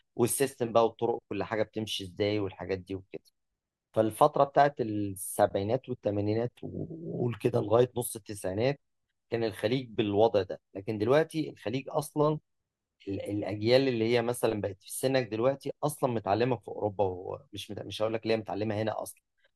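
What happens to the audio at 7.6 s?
Nothing goes wrong at 7.6 s: the speech runs on intact through that moment, with no dropout, click or other fault.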